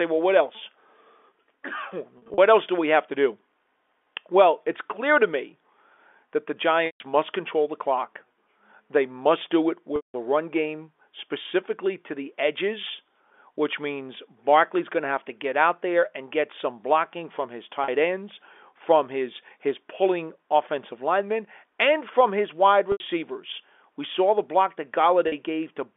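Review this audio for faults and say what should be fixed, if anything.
Packet loss with pitch repetition shows up at 2.18 to 2.38 s (gaps scattered across 200 ms), 6.86 to 7.00 s, 9.96 to 10.14 s, 17.84 to 17.88 s, 22.92 to 23.00 s and 25.28 to 25.32 s. The receiver fills each hole by looping the last pitch period, so short ones sound like a brief buzzy hold. The 140 and 180 ms gaps fade toward silence before the sound cross-fades back. The 40 ms steps fit 20 ms packets. A bigger jitter buffer or some forward error correction on the link should stop this.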